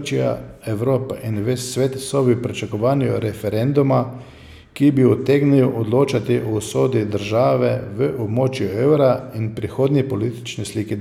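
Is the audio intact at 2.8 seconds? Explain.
Yes, the audio is intact at 2.8 seconds, with no audible fault at that moment.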